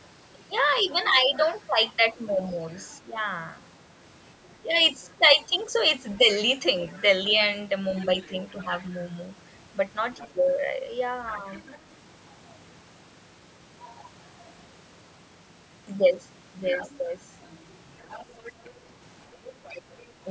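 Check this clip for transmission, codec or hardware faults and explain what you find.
Two echo-control faults appear in this speech recording, both tied to a loudspeaker call.

Other side's voice leaking through occurs at 0.76–2.86 s, 4.46–8.87 s, 10.16–11.79 s, 16.63–16.91 s and 18.02–20.07 s. A second, fainter voice sits under the talker, mostly around 25 dB down, rising to roughly 15 to 20 dB below in the last two stretches. The likely cause is the far end's audio playing from the device loudspeaker, reaching the microphone, and not being fully cancelled, so it is sent back along with the talker.

Speech suppressed in double talk occurs at 1.12–3.17 s and 4.63–6.22 s, overlapping the first two leakage stretches. The talker's level dips in short pieces, roughly 10 dB at the deepest, totalling a few hundred milliseconds in each span. The likely cause is the echo canceller failing to tell the talker apart from the loudspeaker echo while both sides were speaking, and turning the microphone signal down. 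The same call processing also band-limits the audio at 8 kHz.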